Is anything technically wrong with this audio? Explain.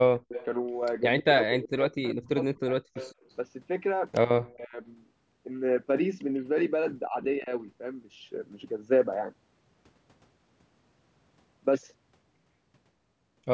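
Yes. The clip has two kinds of call-processing fault.

Echo leak appears from 0.18 to 0.45 s, 2.07 to 2.15 s, and 2.96 to 3.31 s. A delayed copy of the speech trails the original by about 149 ms. It is strongest in the first stretch, about 10 dB below the speech, and weakest in the second, about 25 dB down. The likely cause is a far-end loudspeaker whose echo canceller let part of the returned signal through.

Speech suppressed in double talk occurs from 1.2 to 2.69 s, 4.42 to 4.76 s, and 7.09 to 7.5 s. The speech dips and drops out in pieces. The first two stretches fall by roughly 40 dB at their deepest, and the first loses about a second in total. The third is milder, around 15 dB. This likely comes from an echo canceller that could not separate the talker from loudspeaker echo while both sides spoke, so it turned everything down.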